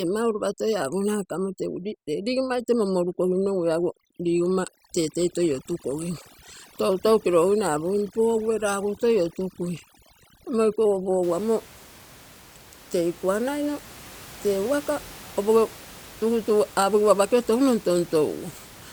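Overdone noise removal runs from 0.0 to 11.23 s: a suppressor set far too aggressively pulls individual frequency bands down whenever they approach its noise estimate, so the gaps become near-silent with twinkling specks. After that point, room noise about 22 dB below the speech returns.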